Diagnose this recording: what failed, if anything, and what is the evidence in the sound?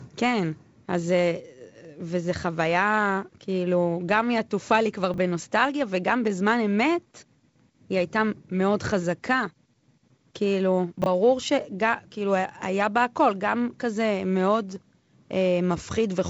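Chunks out of order, at the network or jitter-buffer stage, occur at 5.14 to 5.18 s and again at 11.02 to 11.06 s. Each is a 40 ms stretch where a 20 ms piece of speech plays one slot late, swapped with its neighbour. This produces a brief jumbled stutter with hard joins. Unlike a dropout or packet-loss concealment, nothing is missing or smoothed over: all the audio is present, just in the wrong order. The G.722 wideband coding, with nothing above about 7.7 kHz, is working normally.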